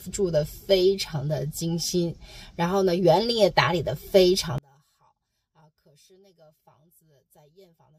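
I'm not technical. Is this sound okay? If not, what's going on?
No. From about 4.58 s to the end, the sound suddenly drops away almost to nothing, leaving only a faint trace. That is likely one channel inverted: one side is flipped, so when both sides are combined they cancel each other out.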